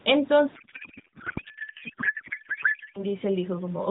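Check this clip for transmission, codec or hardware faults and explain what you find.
One fault is present in this speech clip. It is carried over AMR narrowband, whose light coding and 4 kHz ceiling fit the 12.2 kbps mode.

From 0.56 s to 3.03 s there is a codec payload misread. Octet-aligned AMR is unpacked as bandwidth-efficient, which shifts every field, so the speech becomes garbled warbling noise that barely tracks it.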